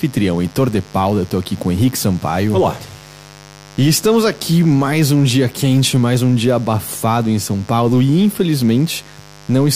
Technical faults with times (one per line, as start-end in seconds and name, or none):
0.00-9.76 mains buzz